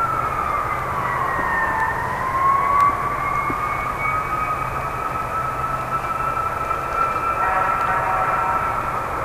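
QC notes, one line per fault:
0.79–8.81 s, periodic USB or driver dropouts: evenly spaced ticks about once a second, roughly ten in all. Each is a gap of about half a millisecond replaced by silence, where a recurring background task briefly stalls the USB or audio driver path.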